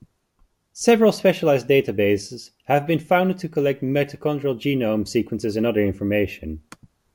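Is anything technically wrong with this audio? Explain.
Yes. Crude rate conversion runs through the whole clip. Samples were repeated rather than filtered, in a pattern that points to a 32 kHz to 48 kHz step. The repeats add tones unrelated to the speech. A gritty, inharmonic fizz rides on loud, high sounds, roughly 30 dB down.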